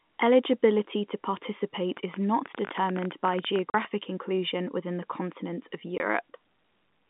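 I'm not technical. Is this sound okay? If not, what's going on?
No. From 1.97 to 3.86 s there is a train of clicks: about thirty sharp ticks, roughly fourteen a second at an uneven pace, popping on top of the speech and in its pauses. The likely cause is electrical interference or a faulty connection or power supply.

There are also two short dropouts, a fault called packet loss filled with silence. At 3.70 to 3.74 s (40 ms) and at 5.98 to 6.00 s (20 ms) the sound cuts to dead silence for a moment. Unlike the clicks, nothing is added here. Pieces of sound are simply missing, in lengths that fit one or two lost chunks of audio. The narrow, phone-line quality of the whole clip is normal for a telephone call.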